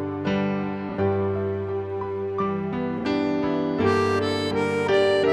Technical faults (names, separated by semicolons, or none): frames out of order